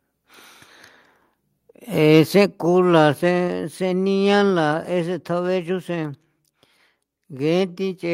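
From 2.15 to 2.43 s the loudest syllables take on a brief harsh, crackling edge, the sound of microphone overload. The peaks run only about 1 dB past full scale, and just a small fraction of the waveform gets its tops flattened, so the grit is confined to the strongest moments rather than smeared across the phrase. The likely cause is an input volume set high enough that the converter ran out of headroom on those peaks.

At 2.46 s, right after that distorted stretch, the whole signal, voice and room together, falls in level in a single step of about 5 dB, with no fade. That abrupt drop marks the microphone volume being stepped down, and its timing just behind the overload fits call software likely reacting to the clipping by cutting the device's input gain in one move rather than easing it down.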